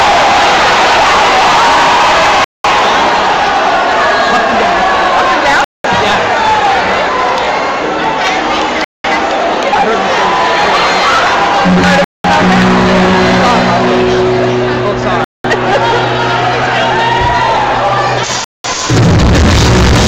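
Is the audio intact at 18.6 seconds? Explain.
No. At 18.6 seconds the audio falls inside a gap between chunks. The stream appears to be assembled from pieces about 3 seconds long, and at this join 200 ms of silence was left, from 18.44 to 18.64 s. No sound is lost; it is pushed later. What you hear is a short hole in the audio.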